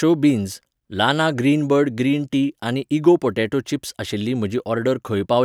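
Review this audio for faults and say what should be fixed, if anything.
A steady ticking runs under the speech for the whole clip, a rough buzz at 25 per second that drops away in pauses. This is a resampler restarted on every block: each 40 ms block was converted to the new rate in isolation, so the filter saw no real neighbouring samples at block edges and left a small error at every boundary. To prevent it, run one continuous resampler whose filter state carries across block boundaries.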